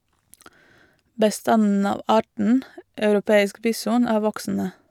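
No technical faults can be heard anywhere in the speech.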